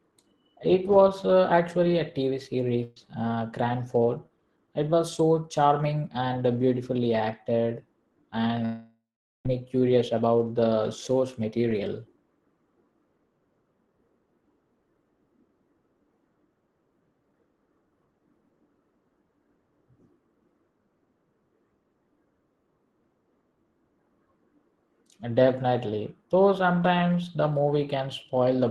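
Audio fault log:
2.83 to 2.97 s, burst of packet loss: The sound turns into a short held sound for about 130 ms, thinning as it goes, and then jumps ahead to later material. Several packets in a row never arrived in time, so the receiver kept extending the last sound it had, turning it down across the gap, and about 130 ms of the original audio was skipped rather than delayed.
8.65 to 9.46 s, long network dropout: The audio stretches into a fading fill for a few tenths of a second, then goes fully silent for about 0.43 s before returning at "me curious about the". The likely cause is a break in the network path lasting around 0.8 s, during which the receiver first extended the last sound as a decaying fill and then gave up, leaving silence, with that stretch of audio never played.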